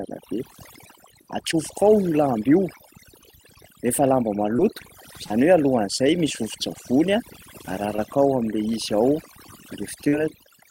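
Overdone noise removal runs through the whole clip. Frequency bands near the noise floor are pushed to silence, leaving twinkling specks.

Short concealed packet loss occurs at 1.51–1.55, 4.57–4.60, 5.26–5.32, 7.96–8.00 and 10.08–10.14 s. Gaps of about 20 to 40 ms were patched by extending the preceding sound, heard as brief smears or wobbles.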